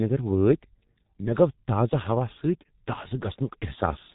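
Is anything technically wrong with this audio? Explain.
Yes. The G.723.1 codec affects the whole clip: a low-bitrate telephony coder, consistent with about 6.3 kbit/s, removes everything above 3.8 kHz and rebuilds the speech from a coarse, slowly updated model. The result is muffled, hoarse speech with smeared consonants.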